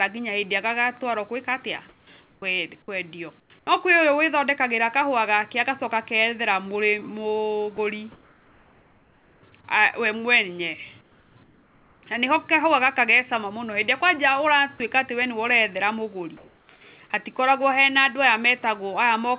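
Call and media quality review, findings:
Comfort noise in place of the background: at 1.89–2.42, 3.40–3.67, 8.12–9.52 (ending before "we mwene"), 11.01–12.03 (after "we mwene") and 16.37–16.81 s (before "hatikoragwo he na andũ"), the room tone becomes steady, featureless hiss. Background sits about 35 dB below peaks and shifts by about −3, −4 and +1 dB in the three marked gaps. Likely cause: sender DTX, with the receiver synthesising noise between updates.

Sound dropped by the voice detector: brief clipped-out sound at 7.77 s (10 ms) and 14.78–14.80 s (20 ms), filled with comfort noise. The sender's VAD likely misread the sound as background. The narrowband path cuts everything above 4 kHz, consistent with G.711 A-law.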